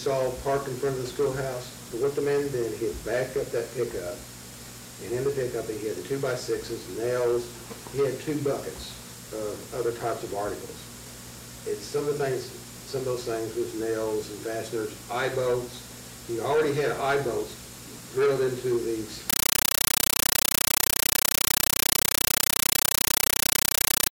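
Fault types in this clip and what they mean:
Compressed stream played as audio: from 19.30 s to the end, an undecoded AC-3 bitstream is output as raw samples. Loud static arrives in 9.33 ms bursts 31.25 times a second, with silent padding between. That strict frame rhythm separates it from random digital noise.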